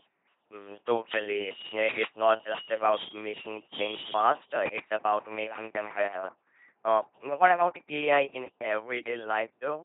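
A steady low drone at 50 Hz sits under the speech from start to finish, at roughly 15 dB below the voice. This is mains hum, where a ground loop or nearby transformer leaked the power line frequency into the signal.

Throughout, the speech sounds heavily buzzy and mechanical, like a robot voice, with nothing above 3.8 kHz. That is the LPC-10 vocoder, which fits a 2.4 kbit/s link. It rebuilds each moment as either a pulse-driven buzz or noise through a simple filter.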